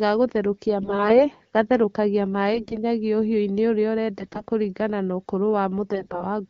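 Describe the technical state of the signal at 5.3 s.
At 5.3 s the speech is intact, carried through the AMR wideband (HD Voice) codec at 12.65 kbit/s, which keeps it clear.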